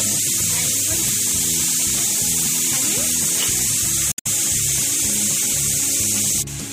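At 4.09 s to 4.27 s, damaged data in the compressed stream makes the decoder misread frames and lose sync for about 0.17 s, producing a brief glitch. Unlike a plain dropout, which is clean silence, this comes from the decoder losing its place in the stream.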